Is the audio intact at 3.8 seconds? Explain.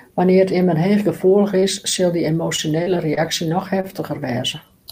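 No. From 3.81 to 3.85 s there is a short stall from a late packet: the next packet had not arrived, the jitter buffer ran dry, and the receiver held the last sound for about 27 ms before resuming where it left off. No audio is lost, but everything after is shifted 27 ms later. On a spectrogram the harmonics run flat and unchanging across the gap; the waveform shows a repeated, slightly dipping cycle before normal motion returns.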